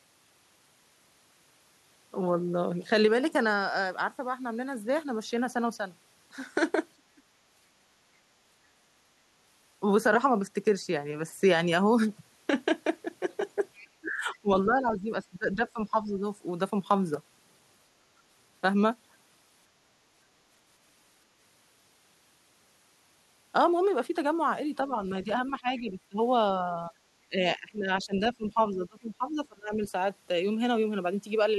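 Speech recorded through a call path whose echo canceller misbehaves in three ways. The talker's voice dips in pieces at 6.97–7.22, 13.81–16.25, 24.88–26.18, 26.75–26.92 and 27.24–29.71 s, most deeply by roughly 20 to 25 dB and only slightly around 26.8 s. This is likely speech suppressed in double talk, where the canceller turns down the wanted voice along with the echo. At 13.77–13.86 s a faint scrap of a second voice, well below the talker, is likely the other side's voice leaking through. It marks the start of the long suppressed stretch and is a different sound added rather than the talker's own voice thinning. At 18.01–18.14 s the room sound alone drops by about 8 dB and then recovers, most likely background gated by the echo canceller. It is told apart from double-talk suppression because no speech is being cut, only the ambience.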